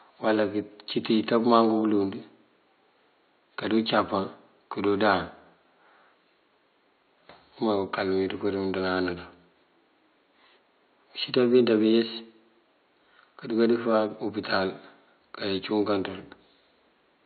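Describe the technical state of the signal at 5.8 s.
At 5.8 s the signal is intact, with only the room's own background noise sitting about 45 dB below the speech.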